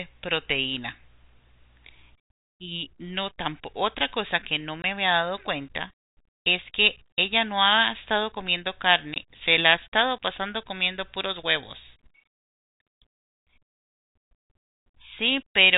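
At 4.82 s and again at 9.14 s the speech drops to dead silence for 20 ms, packet loss filled with silence, where one lost 20 ms packet was replaced by nothing. Unlike concealed loss, nothing is smeared or repeated: abrupt edges bound a clean hole, heard through band-limited G.711 telephone audio.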